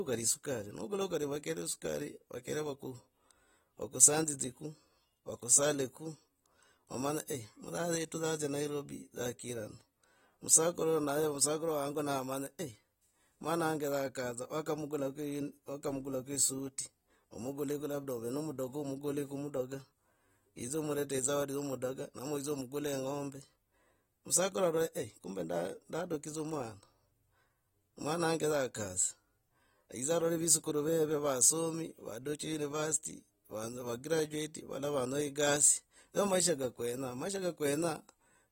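Speech that sounds dull and smeared throughout, with a warbling, fizzy edge on sibilants and nothing above 16.6 kHz, likely from AAC compression at a low bitrate of around 40 kbps.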